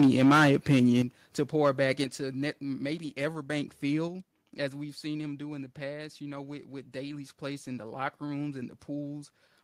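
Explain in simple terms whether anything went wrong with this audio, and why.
Yes. From 0 to 1.0 seconds the loudest parts crackle harshly, and again more faintly from 1.64 to 2.01 seconds. This is microphone overload, likely because the input was set so high that the peaks had their tops cut off. Unlike ordinary noise, it only appears on loud moments. Then the whole sound, voice and background together, suddenly gets quieter in single steps at 1.02, 2.04 and 4.08 seconds. That is the microphone volume being stepped down, likely the call software reacting to the distortion, which explains why the first two drops follow right after the crackling.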